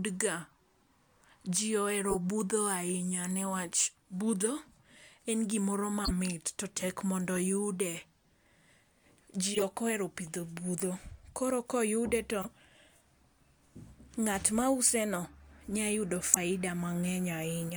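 Damaged compressed frames were decoded as if intact, so misread gains and codes put energy at wrong frequencies: corrupt frame decoded bursts at 2.09, 6.05 (after "en gimoro"), 7.35, 9.54, 10.79, 12.41 and 16.33 s. Each is a brief chirp or noise blip, loudest at 16.33 s.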